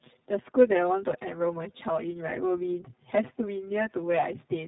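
Two faults run through the whole of the speech, from start to finish.

The first is channel delay, heard as comb filtering. One channel arrives about 7 ms late. The two are then summed to mono. Wherever the copies fall out of step, they cancel. That carves fixed notches into the spectrum, starting around 70 Hz and repeating at regular intervals above it. The speech sounds hollow and phasey. Its body feels thinned, as if heard down a tube.

The second is tandem speech coding. The sound passed through two low-rate speech coders in sequence, with a plain telephone-grade link between them. Each coder had to work on the already damaged output of the one before. The artefacts stack up. The speech is rough and muffled, with a warbly texture. Nothing is present above 3.8 kHz. The character fits a G.729A stage followed by iLBC.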